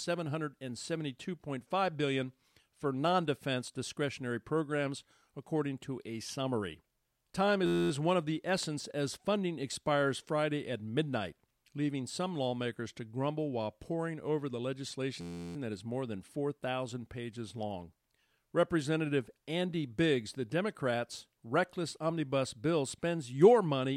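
At 7.66 to 7.91 s and again at 15.21 to 15.56 s, a system hang loop replays one 11.61 ms slice of speech, which fits a 512-sample buffer, as an 86.1 Hz buzz. The waveform shows identical repeating cycles, and the spectrogram shows flat harmonic bands spaced 86 Hz apart.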